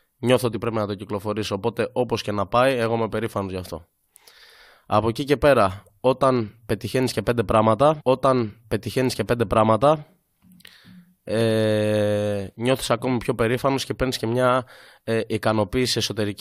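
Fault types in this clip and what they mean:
Stream segment repeated: the player queued the same chunk twice, so about 2 s of speech from 8.0 s replays, with a small blip at the jump back.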